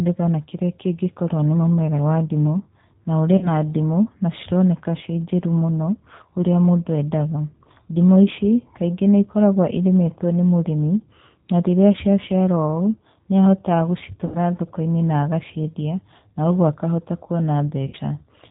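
Speech carried throughout by the G.729 codec, with plainly audible damage. The band stops at 4 kHz, leaving an empty spectrogram above that line, and the voice sounds rough and slightly synthetic, as expected from a stream of about 8 kbit/s rebuilt from filter, pitch and pulse parameters. There is VoIP packet loss concealed by the speech codec just after "wa ndimũ na ũrĩ" at 3.37–3.48 s (about 40 ms lost), and at 14.26–14.37 s and 17.87–17.97 s (about 60 ms each). In each gap the decoder repeats its last pitch and filter, stretching the sound into a buzzy tone or coloured noise that fades, shown by a shrinking waveform envelope, before the speech recovers.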